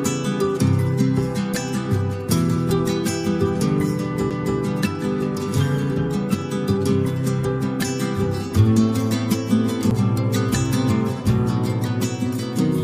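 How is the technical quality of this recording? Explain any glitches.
Two CD skips break the playback, at 4.3 s and 9.9 s. Each time the laser jumps, from a knock or a flaw, onto a different turn of the disc's spiral, so the player mutes for a few milliseconds, then resumes elsewhere. You hear a brief tick, and the sound jumps abruptly.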